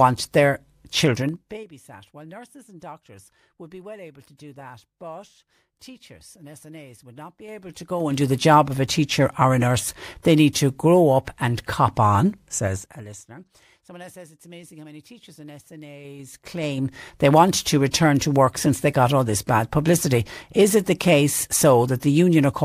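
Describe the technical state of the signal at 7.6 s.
A fine ticking rides on the speech from 7.43 to 8.27 s, just after "would not". This is zipper noise: a level move of roughly 25 dB is applied in unsmoothed 3 dB jumps, around ten a second, each jump clicking audibly.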